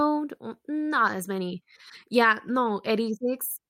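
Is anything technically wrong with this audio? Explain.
Yes. The speech carries a timing fault that runs through the whole clip.

Clock drift between sender and receiver is present from start to finish, with the sender's clock running roughly 4 percent fast. Because audio arrives slightly faster than the receiver plays it out, the jitter buffer keeps filling beyond its target. The receiver has to shed the surplus to keep latency from growing. The drift isn't heard as a tone or noise. It shows up only through the corrections it forces.

Repeated timing corrections run from 0.07 s to 3.66 s, amounting to a 104 percent playback rate. Since the sender is fast, every edit goes the same way: the receiver cuts out short pieces of audio. The cuts are small and unevenly spaced, so they come across as faint hiccups and a slightly hurried, uneven tempo.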